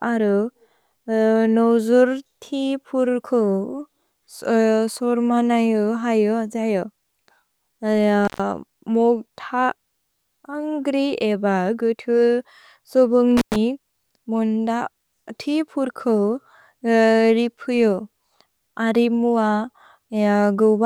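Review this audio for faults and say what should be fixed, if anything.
Two intermittent contact dropouts in this speech, at 8.25 to 8.40 s and 13.37 to 13.56 s. Each time the signal path briefly opens, for about 120 ms and then about 106 ms, so the sound cuts out with crackle as the connection breaks and remakes, and faint hiss fills the gap. That's a cable or plug connection somewhere in the chain momentarily losing contact. Worth fixing: reseat or replace the suspect cable and connectors, and strain-relieve them so nothing gets knocked during the take.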